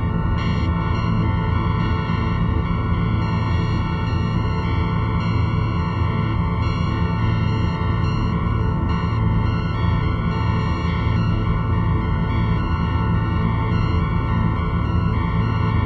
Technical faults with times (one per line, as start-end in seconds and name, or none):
none